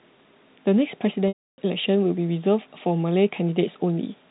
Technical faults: packet loss with pitch repetition

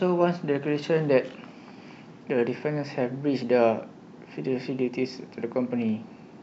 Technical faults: none

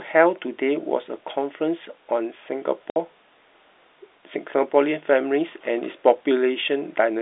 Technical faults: packet loss filled with silence

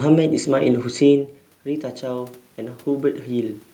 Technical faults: automatic gain rising

